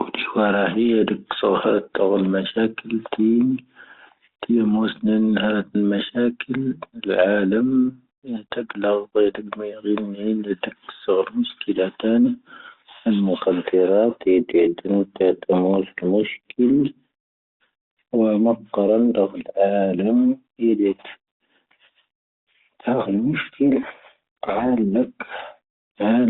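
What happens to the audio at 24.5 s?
At 24.5 s the speech is buried in harsh, grinding distortion. The burst runs from 23.82 to 24.66 s and then the line clears. This is a codec payload misread on the G.726 link, the 32 kbit/s telephone-band path carrying the call. Sender and receiver disagree on the bit order of each G.726 code word, so the decoder applies the wrong adaptive steps and rebuilds a rasping, distorted signal until the packing matches again.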